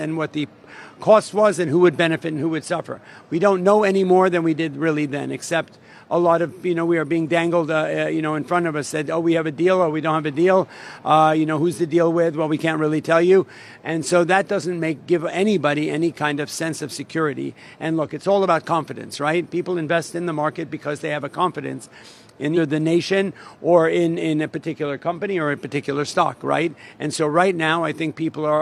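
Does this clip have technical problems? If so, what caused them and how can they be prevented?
Yes. At 22.53 to 22.58 s, compressed frames are skipped: roughly four frames, about a fifth of a second, never play, which fits 46.4 ms frames. Unlike a dropout, there is no silence. The sound jumps ahead where the remaining frames join. Prevent it by verifying file integrity after transfer and re-encoding or re-copying from an undamaged source.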